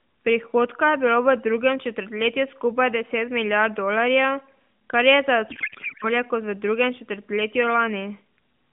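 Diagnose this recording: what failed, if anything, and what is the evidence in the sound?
The codec payload was misread: the receiving decoder unpacked the AMR frames with the wrong bit layout, which points to octet-aligned payloads being read as bandwidth-efficient. Right after "kar je za", from 5.50 to 6.07 s, the speech gives way to garbled noise and warble that barely tracks it. The decoder is pulling parameters from the wrong bit positions. Outside that stretch the narrowband AMR path, band-limited to roughly 150 Hz to 3.5 kHz, carries the speech with only light coding damage.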